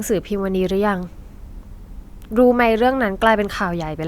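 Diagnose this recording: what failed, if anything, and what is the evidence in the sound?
Nothing failed: across the whole recording there is no audible evidence of a fault at any stage of the chain.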